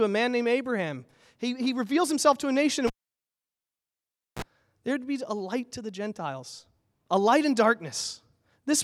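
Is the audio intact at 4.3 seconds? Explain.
No, at 4.3 s there is near silence inside a dropout from 2.87 to 4.42 s, after "himself to a nation". A cable was pulled and plugged in: a pop, 1.5 s of silence, a brief 60 Hz mains buzz, then another pop.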